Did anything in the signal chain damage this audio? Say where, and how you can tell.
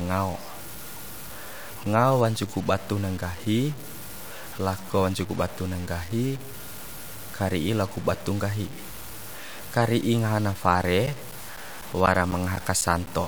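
Yes. The speech was likely reduced to about 6 bits at a sample-format conversion stage, truncated with no dither. Truncation ties the rounding error to the signal, so the noise isn't a steady hiss: it follows the speech as grainy, gritty distortion that changes with every syllable, sitting only about 20 dB below the voice. Quiet decays and pauses crumble or sputter between coarse steps instead of fading smoothly, throughout the whole clip.

The driver or buffer stage also suffered periodic USB or driver dropouts from 11.06 s to 13.07 s. Something blocked the audio path every 0.25 s, and each time roughly 10 ms of audio was lost and replaced with silence. That produces a regular train of around ten clicks or ticks at a steady four per second. The even spacing points to a recurring background task stalling the bus or driver, not to random network loss.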